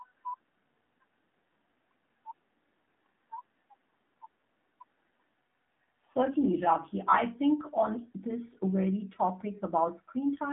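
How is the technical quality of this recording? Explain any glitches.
The recording has narrowband mobile-codec damage running through its whole length.

AMR narrowband mobile codec: the speech sits in a 200 Hz to 3.7 kHz line band with nothing above 3.8 kHz. It carries a plainly audible buzzy, synthetic edge from pulse-driven vocal-tract modelling at a low rate, consistent with about 7.4 kbps. That texture, not the band limit alone, separates it from a simple telephone filter.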